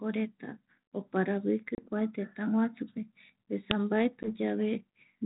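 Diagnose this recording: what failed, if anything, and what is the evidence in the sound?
Packet loss on an ADPCM call, at the network stage. At 1.75 s a hard-edged hole of about 30 ms of silence opens, a few packets' worth. At 4.23 s a 10 ms gap follows, likely a single packet. The 32 kbit/s G.726 decoder's predictor and step size then disagree with the sender's. Speech returns slightly distorted, and recovers by 1.81 s and 4.32 s.

An uninitialised buffer, in the driver or buffer stage. At 3.71 s there is a loud crack lasting about 5 ms. A playback block was sent out before audio was written into it. Leftover memory contents were played as if they were samples.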